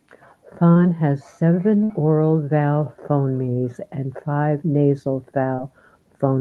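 At 0.71 to 0.78 s, just before "has seven oral vowel", there is a short concealed packet loss. About 40 ms never arrived. The decoder continued the last sound, leaving a brief smear.

At 1.84 to 1.92 s, between "has seven" and "oral vowel phonemes and", a burst of packet loss removes 60 ms. The last sound is held and faded, then the audio jumps ahead.

At 5.56 to 5.60 s, after "phonemes and five nasal", another short concealed loss patches a 20 ms hole with a quick smear.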